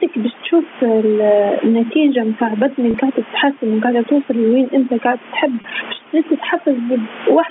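Throughout the speech, overdone noise removal is clamping down on the room noise, which sat about 28 dB below the voice. The gaps fall to near silence scattered with twinkling specks. What tells this apart from simple band-limiting is that the loss flickers band by band as the level changes, rather than staying a fixed dullness.

Gain pumping also runs through the whole clip. The gain swings by roughly 15 dB, ducking under loud syllables, likely because the input gain was set far too high and a fast limiter reacts to every peak. The breathing rise and fall in the pauses is what marks it out from steady heavy compression.

From 2.91 to 2.94 s, and again from 5.61 to 5.64 s, packet loss with pitch repetition covers a 30 ms gap. Each gap is bridged with a briefly held, buzzy repeat of the last pitch cycle instead of a click or a dropout to silence.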